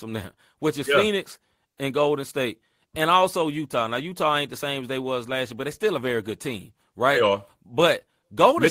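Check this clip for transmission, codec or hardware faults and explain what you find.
No transmission, codec or hardware faults turn up anywhere in this speech recording.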